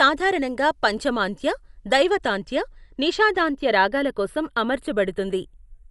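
Speech, with two faults running throughout. A slow flanging drifts through the sound. This is the channels drifting apart: the two sides seem to run on separate clocks about 20 parts per million apart, so their offset creeps toward a fraction of a millisecond and comb notches sweep slowly when summed. The sound is also plainly dull, with nothing above 11.5 kHz, and a rough, fluttering noise clings to tonal parts. The likely cause is Dolby Digital compression at a low rate, which fits roughly 64 kbps, where starved frequency lines are filled with noise.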